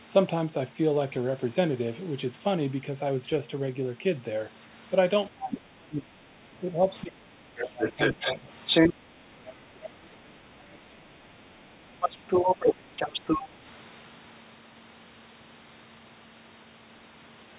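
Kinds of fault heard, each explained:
Speech suppressed in double talk: While both ends talk at once, the talker's speech sinks, most deeply from 5.29 to 8.5 s, by roughly 25 dB. Shallower dips follow. This is likely an echo canceller muting the near talker while failing to separate it from loudspeaker echo.
Other side's voice leaking through: A second voice sits alongside the talker from 7.8 to 8.94 s at about 5 dB above the talker, and again from 10.3 to 13.43 s at about equal level. Brief faint scraps appear at 9.47 and 9.84 s. This is likely far-end playback left uncancelled in the microphone.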